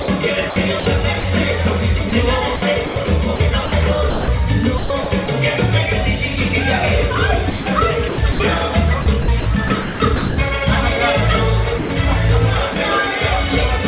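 From 0.02 to 1.24 s, 2.1 to 5.28 s, 7.5 to 8.4 s and 9.02 to 10.38 s the sound turns choppy. Fragments drop out, with about 220, 640, 340 and 580 ms filled in across those stretches. This is sound chopped by the voice detector. The sender's detector likely kept toggling off during quieter passages, and the receiver filled the gaps with comfort noise.

At 11.78 to 11.9 s, and again briefly at 12.74 to 12.76 s, the sound gives way to steady noise or near silence for about 120 ms and then 20 ms before resuming. This is sound dropped by the voice detector. The detector likely mistook these moments for background and stopped sending, and comfort noise played until it triggered again. Throughout, nothing is heard above 4 kHz, which fits a G.711 call path at 64 kbps.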